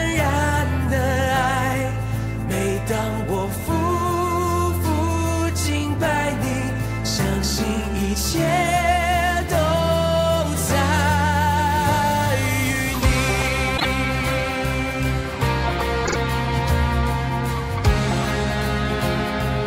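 Repeated frames: at 13.77 to 13.85 s a 24 ms block, which fits a single compressed frame, was written twice more than once, and at 16.05 to 16.16 s a 48 ms block was repeated twice. The decoder replays each, causing stutters that add 48 and 96 ms.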